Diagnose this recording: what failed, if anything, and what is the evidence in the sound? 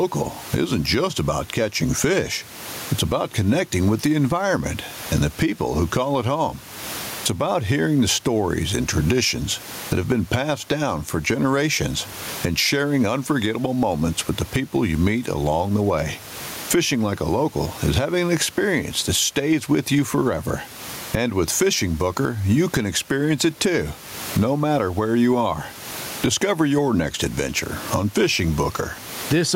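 Gain pumping runs through the whole speech recording. The room noise sits about 30 dB under the speech, and the gain swings by around 20 dB. Loud and soft passages end up squashed to much the same level. The likely cause is input gain set far too hot at the mic stage, so a fast limiter or compressor in the processing keeps clamping down on each loud sound.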